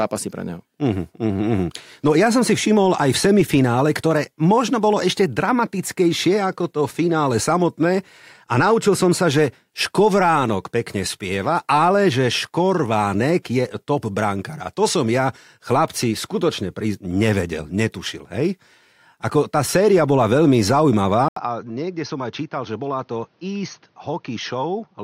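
Input switched to a poorer device at 21.28 s, running to the end: after an 80 ms silence, the speech turns dull and boxy, with nothing above 6.4 kHz, drops about 10 dB, and carries a faint new noise floor, likely from recording switching to a different microphone or headset.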